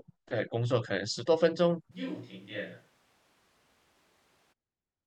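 At 1.93 s the speech turns suddenly roomy and hollow, loses bass, drops by roughly 10 dB and gains audible background noise well below the voice, until it snaps back at 4.51 s. This is likely a switch to a distant microphone after the close one dropped out.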